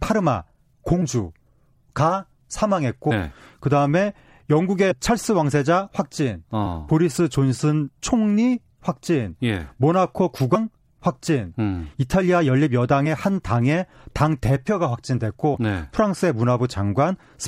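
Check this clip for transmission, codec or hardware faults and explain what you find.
The clip shows compressed frames skipped three times: at 3.10 s, about 300 ms lost (roughly ten 26.1 ms frames); at 4.90–4.92 s and 10.54 s, about 100 ms each. Whole compressed frames go missing, so the speech jumps ahead with a soft smeared blip. There is no silent gap or hard click, as a dropout would leave.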